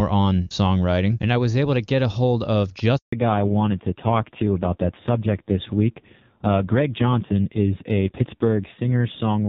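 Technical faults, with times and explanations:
2.97 to 3.13 s, handover gap: the speech cuts out abruptly and there's 160 ms of dead silence. That's the call being passed between networks, with no speech frames arriving during the switch, so whatever was said in that slice is simply gone.
3.13 s to the end, fallback to narrowband: after the gap, everything above 4 kHz disappears and the speech turns duller and rougher. The call has dropped from clean HD Voice (AMR-WB) to a narrowband codec, and the roughness fits AMR-NB at a low rate, around 5.9 kbit/s.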